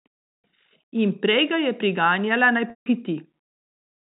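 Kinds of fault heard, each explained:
Packet loss with pitch repetition: Right after "ga je priganjala naj", about 160 ms of speech drops out, which fits eight 20 ms packets. The receiver repeats the last pitch period, giving a brief buzzy hold. It fades to silence, then speech returns through a short cross-fade.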